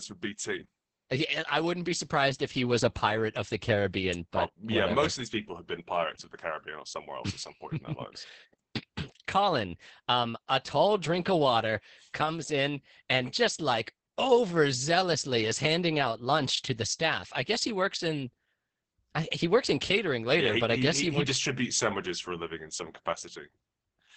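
From start to end the speech carries heavy Opus voice compression. The top of the band stops near 8 kHz, and the voice sounds muffled, hoarse and faintly robotic. This fits the SILK linear-prediction coder in wideband mode at a very low bitrate, around 10 kbps, coding the excitation coarsely. A simple low-pass filter would dull the sound without roughening it. Unlike MP3-style swirling, the damage here sits in the buzzy, grainy texture of the voice itself.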